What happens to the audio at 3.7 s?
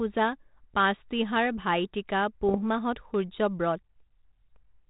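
Nothing goes wrong at 3.7 s: the speech there continues without any fault, carried through the 32 kbit/s G.726 ADPCM path with only the band limit and faint coding grain that path always leaves.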